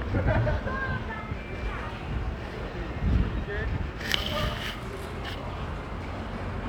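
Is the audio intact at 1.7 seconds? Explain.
Yes, the audio is intact at 1.7 seconds, with no dropout, click, distortion or other fault at that point.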